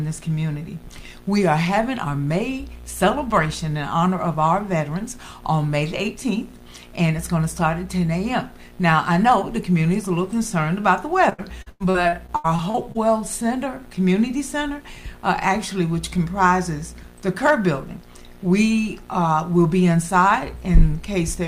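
From 11.29 to 12.97 s, repeated packet loss (robotic sound): eleven short dropouts, each patched by extending the preceding sound, giving choppy stutter rather than clean silent gaps.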